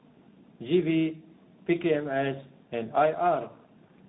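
Throughout, tandem speech coding passed the speech through two coders in a row, fitting G.729A then CVSD, leaving it rough, warbly and muffled, empty above 3.8 kHz.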